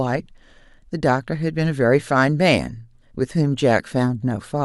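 No technical faults can be heard anywhere in the recording. The speech runs steadily from its opening to its close with nothing breaking into the signal.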